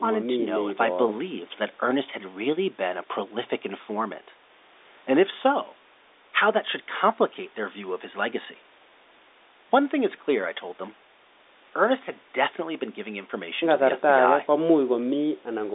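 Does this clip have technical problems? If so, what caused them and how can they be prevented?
No, the speech carries the ordinary narrow band of a G.711 A-law telephone line, with nothing above about 3.8 kHz after the call's microphone processing, and no technical problem can be heard.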